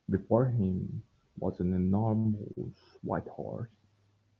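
At 2.18 s a sound hangs on unnaturally, stretched by about 63 ms with a faint buzzy, slightly dipped quality until 2.34 s. At 2.53 s a shorter hold of about 35 ms follows, ending by 2.59 s. Both are short stalls from late packets. The jitter buffer ran dry, so the receiver extended the last audio until the packet arrived and resumed where it had stopped. Nothing drops out.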